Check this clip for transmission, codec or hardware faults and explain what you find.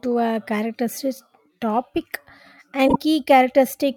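One fault is audible in the speech: frames out of order, 2.88 to 2.96 s. Two adjacent 24 ms frames play swapped, causing a brief garbled flutter. Unlike a dropout, no time is lost.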